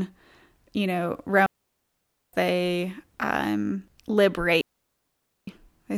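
A digital wireless link lost too much data twice in this speech clip, so the receiver muted rather than pass on corrupted audio: two digital wireless dropouts. Each is a clean hole of near silence, entered and left with a very short fade and no noise burst on either side. The first runs from 1.46 to 2.33 s, about 0.87 s, between "you know" and "they um"; the second from 4.61 to 5.48 s, about 0.86 s.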